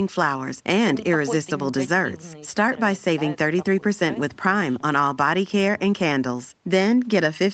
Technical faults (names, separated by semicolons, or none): none